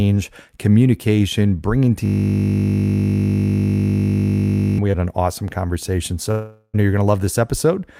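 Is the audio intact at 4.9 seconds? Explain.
No, short concealed packet loss at 4.91–4.95 s: about 20 ms never arrived and was synthesised from preceding sound, giving a brief smear, visible as a flattened spectral patch.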